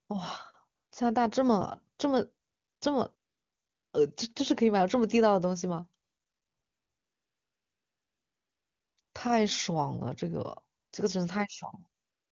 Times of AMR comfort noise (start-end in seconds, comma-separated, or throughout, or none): 0.07-0.09, 0.75-0.91, 2.47-2.81, 3.15-3.93, 6.03-9.13, 10.79-10.91, 12.01-12.31